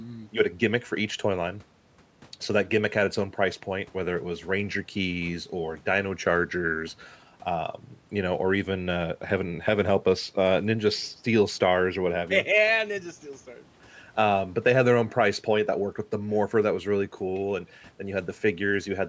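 No technical faults are audible.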